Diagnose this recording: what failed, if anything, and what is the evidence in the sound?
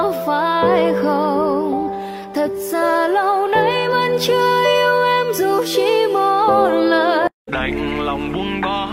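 Nothing failed at any stage of the chain: no audible evidence points to a problem in wiring, conversion, buffering, processing, transmission, storage or playback.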